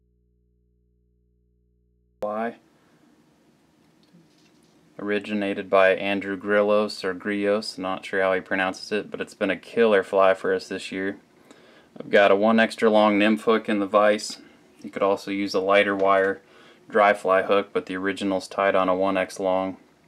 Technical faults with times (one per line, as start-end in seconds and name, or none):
0.00-2.23 audio dropout to a faint residue